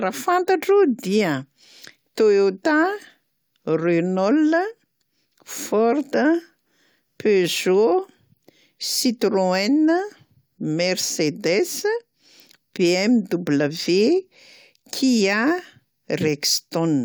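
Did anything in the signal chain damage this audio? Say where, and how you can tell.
No, nothing in this speech recording stood out on listening as damage from any stage of the chain.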